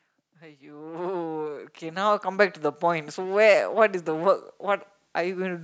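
From 0.4 s to 3.45 s, the level climbs steadily. This is automatic gain rising. The gain control judged the input too quiet and kept turning it up, by about 14 dB in all. The increase is slow, spread over roughly three seconds, so there is no sudden jump. The speech and the background noise grow louder together. The room floor swells along with the speech.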